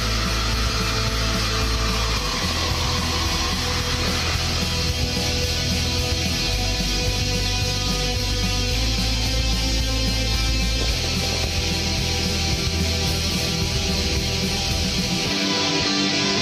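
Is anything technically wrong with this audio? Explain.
Yes. From 2.39 to 3.05 s, 4.02 to 4.59 s and 10.81 to 11.49 s the audio burbles with short blips of noise. This is DAB burbling: at a bit error rate of roughly 0.7 percent, errors slip past error correction, corrupting MP2 samples and scale factors so single sub-bands get noise blips or jump in level for up to a frame.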